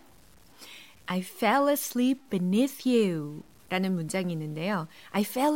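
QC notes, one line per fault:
Throughout, low bit depth without dither: grit follows the speech and quiet tails sputter out, likely undithered truncation near 8 bits, with error roughly 35 dB down.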